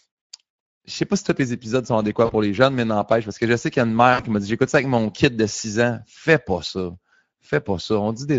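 From start to finish the speech carries plainly audible Speex codec damage: a hoarse, grainy texture where the CELP excitation is starved of bits. The coarseness points to a middle-to-low Speex mode, roughly consistent with about 17 kbps.

At 2.25 to 2.34 s, just after "les épisodes sont adéquats" and before "les jeunes mais n'empêche", VoIP packet loss concealed by the speech codec replaces about 40 ms of audio, which fits two lost 20 ms frames. The decoder extends the last pitch and filter into a short, fading sound.

A longer concealment follows at 4.13 to 4.23 s, between "qu'il y a une" and "qui m'a dit", covering about 60 ms, consistent with three lost frames. The extrapolated sound decays further, and the speech stays weakened briefly after packets resume.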